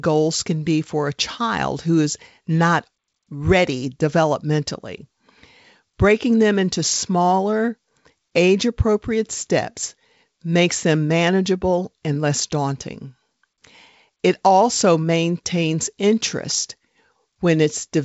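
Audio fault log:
Nothing stood out on listening to this speech, which carries the G.722 wideband telephone coding at 64 kbit/s with no content above about 7.7 kHz.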